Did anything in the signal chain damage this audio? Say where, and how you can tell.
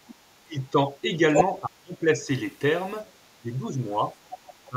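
Yes. Call processing: speech suppressed in double talk, with softened dips at 0.43–1.2, 1.44–2.28, 3.42–4.14 and 4.69–4.76 s. This is likely echo-canceller ducking, not the hard silent gaps of packet loss.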